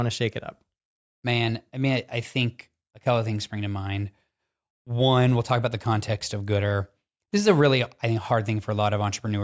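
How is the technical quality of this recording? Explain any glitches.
Nothing in the recording comes across as a glitch; the speech runs on without any dropouts, clicks or stutters to point to.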